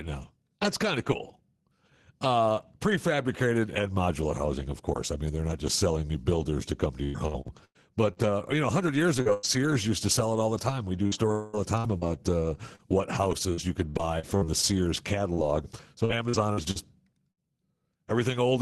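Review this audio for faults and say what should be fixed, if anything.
Repeated packet loss (robotic sound), from 7.03 to 9.45 s and again from 11.07 to 17.40 s. In the first stretch, seven holes break up the sound, the longest about 106 ms. Each is filled by stretching the last bit of audio, about 0.47 s in total, or 19% of that span, which gives a choppy quality. The second stretch has fourteen shorter holes, none over 56 ms, totalling about 0.58 s, or 9% of the span. The stuttering is sparser there but lasts longer. A larger adaptive jitter buffer with Opus in-band FEC, or a more stable network link, would prevent this.

Long network dropout, from 11.32 to 11.56 s. Inside the second loss stretch, the sound stalls for about 0.22 s and is carried by a continuous buzzy extension of the last sound. It doesn't fall to silence before the audio resumes, and that quarter-second of real content is gone. 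This was likely caused by a burst of consecutive packets never arriving, so the concealment had to bridge one unbroken gap. Redundant packet sending, or routing over a less congested path, would prevent this.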